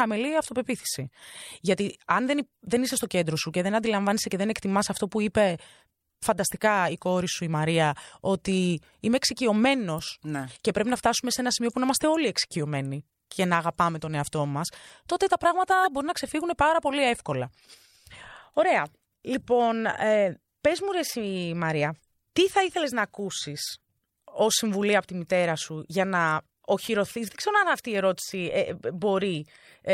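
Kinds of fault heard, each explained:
Corrupt frame decoded: the decoder played compressed frames with flipped bits, misplacing energy in frequency, giving brief blips near 9.98 s and 15.84 s, the second much louder.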